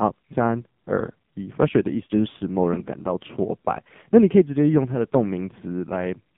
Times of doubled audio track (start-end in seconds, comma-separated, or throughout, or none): none